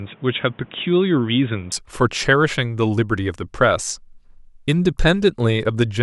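Speech in which, from the start to 1.72 s, nothing reaches above 3.8 kHz and a separate noise floor sits roughly 30 dB under the voice, at about the same level, then clears abruptly without any gap, likely an input switched to a poorer device. That change of noise character, not just of bandwidth, separates it from a simple low-pass filter.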